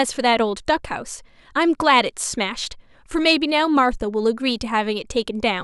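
No technical faults are audible.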